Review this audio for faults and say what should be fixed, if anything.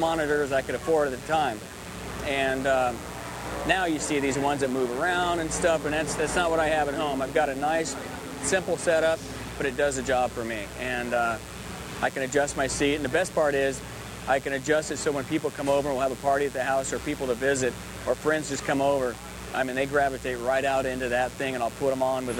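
A steady, raspy mains buzz runs throughout, roughly 20 dB below the signal: switching spikes at twice the 60 Hz mains rate, with harmonics reaching into the kilohertz range. Prevent it by keeping dimmers and rectifier supplies off the audio circuit and using properly shielded, grounded cables.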